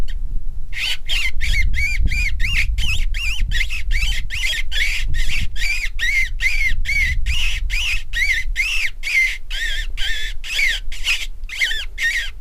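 Crude rate conversion runs throughout. Samples were repeated without filtering, which fits a 44.1 kHz to 48 kHz change, leaving a gritty, inharmonic fizz roughly 25 dB down.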